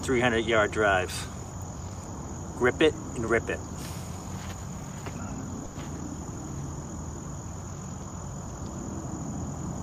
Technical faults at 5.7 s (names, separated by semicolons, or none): burst of packet loss